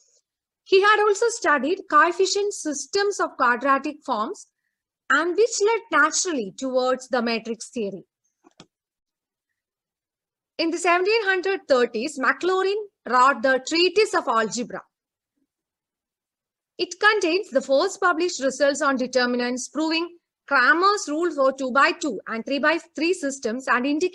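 No technical faults are audible.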